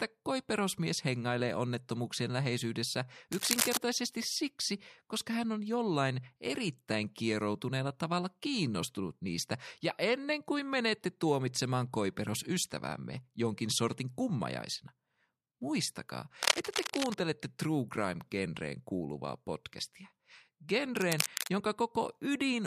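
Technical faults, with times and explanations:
3.32–3.77 s, 16.42–17.17 s and 20.97–21.50 s, cable scratch noise: a worn cable or connector was likely being moved, making its contact resistance jump erratically. This adds dense, ragged bursts of scratching over the speech. The first comes right after "koiperosmies hengailee onnettomuuksien läheisyydessä" and before "siksi koska hän on". The first two are about as loud as the speech, and the last is about 5 dB quieter.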